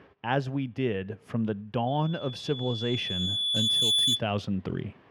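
At 1.87 s a loudspeaker feedback squeal begins: a microphone is picking up its own loudspeaker, and at 3.4 kHz the loop gain exceeds one. That single tone swells over roughly two seconds to a few decibels above the programme before stopping at 4.24 s.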